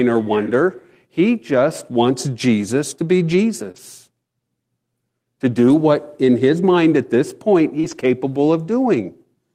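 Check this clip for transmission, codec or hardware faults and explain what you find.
Two kinds of network fault show up, both typical of a packet-based voice call: lost packets rebuilt from error correction, and short concealed packet losses.

Lost packet rebuilt from error correction occurs at 2.07–2.09 s, 3.76–3.78 s, 5.68–5.74 s and 7.83–8.05 s. Packets went missing, but the following packet carried a low-bitrate backup copy that the decoder played instead. There is no gap, but those stretches sound rougher and noisier. The 60 ms and 220 ms spans point to several separate packets recovered this way.

Short concealed packet loss occurs at 3.71–3.76 s and 7.80–7.85 s. Here no backup copy was available in time, so the decoder extrapolated from the preceding sound, pitched if voiced and as shaped noise if not, and then crossfaded back into the real signal. It is heard as a brief smear or wobble of a few hundredths of a second. 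Both events run straight into an error-correction repair, which suggests a burst of loss.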